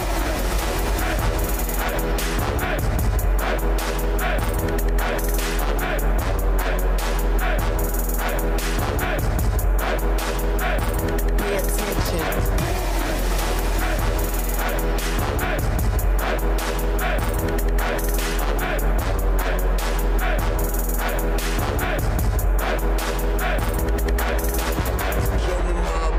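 No technical fault can be heard anywhere in the audio.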